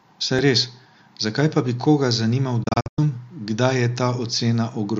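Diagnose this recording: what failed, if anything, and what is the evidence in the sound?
Digital broadcast dropout in reception: failed frames muted the decoder after "pa bi koga zanimal", leaving quick-faded silent holes from 2.63 to 2.99 s, the longest 96 ms.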